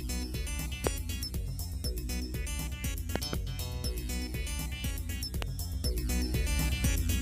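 Sharp loud pops, roughly 20 dB above the sound, land at 0.87 to 0.89 s, as a quick double pop from 3.16 to 3.35 s, and at 5.42 to 5.44 s, with the sound continuing beneath. Each is likely a sudden voltage spike from a switch, plug or static discharge.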